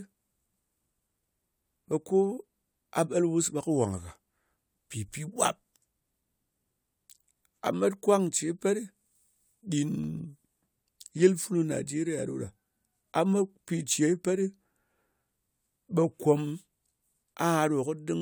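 A speech recording with CD scratch ticks: three tiny ticks at even spacing between 9.83 and 10.25 s, each under a millisecond. The ticks come at the disc's rotation rate, where data was lost beyond error correction. Vinyl clicks, by contrast, fall randomly.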